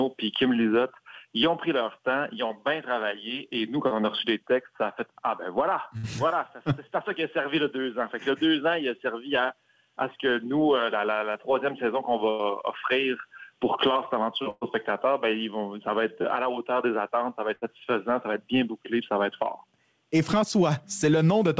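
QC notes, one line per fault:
2.48, 3.88 and 11.31 s: short concealed packet loss. Each is a brief smear lasting roughly 50 to 60 ms, where the sound briefly wobbles before settling back. About 30 ms of audio never arrived in time. The receiver papered over it by extending the preceding sound for 20 to 30 ms and then crossfading into the real signal, so a short transient at these points can be lost.
5.97–6.06, 12.30–12.42, 14.50–14.64 and 17.55–17.64 s: burst of packet loss. Each is a held buzz or fading hiss that replaces the sound, after which the audio picks up further along. Runs of lost packets removed 60, 90, 120 and 60 ms respectively. The receiver kept extending the last sound and turned it down as each gap went on. The longest, at 14.5 s, fades all the way to about 10 ms of silence before the audio returns. These gaps sit on top of the call codec's band limit, with nothing above 8 kHz, which fits G.722 at 64 kbps.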